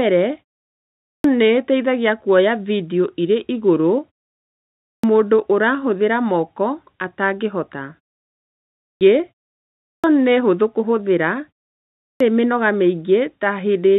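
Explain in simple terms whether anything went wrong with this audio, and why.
Something did go wrong: a clipped start after a pause, five times. After a short silence of about half a second to just under a second, the playback device seems to doze off. When speech resumes, it needs a moment to wake up. So the first 0.26 to 0.29 seconds of speech are lost. This happens at 0.98, 4.75, 8.73, 9.78 and 11.91 seconds. Each time, speech jumps in abruptly, missing its opening sounds.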